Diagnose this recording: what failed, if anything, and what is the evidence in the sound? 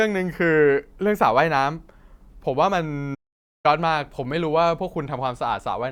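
A playback stall cuts the speech off in mid-flow at 3.14 s, leaving silence until 3.66 s, a gap of about 0.50 s before the audio comes back. The stage is playback: the output simply stops rather than degrading, with no noise or distortion over the gap. The likely cause is the player's buffer running dry, or its output thread being blocked, so nothing reached the device until the player recovered.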